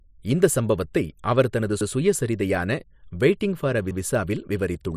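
Around 1.81 s and again at 3.91 s the speech stutters, overlapping chunks: each 2-second block restarts 100 ms early, so that slice plays twice at the join.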